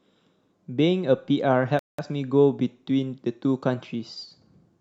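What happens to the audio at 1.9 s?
A Bluetooth stall, likely from radio interference delaying packets until the headphones' buffer emptied, halts playback from 1.79 to 1.99 s. The speech drops to complete silence for about 0.19 s, then continues once the delayed audio arrives.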